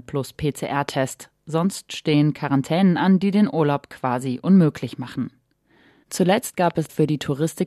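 A sudden voltage step, likely from a plug, switch or static discharge, was added to the signal of this speech clip twice, producing loud pops. The first, from 0.89 to 0.91 s, is a single sharp pop standing well above the speech. From 6.71 to 6.88 s, two weaker pops follow in quick succession, only modestly louder than the speech, which continues underneath both events.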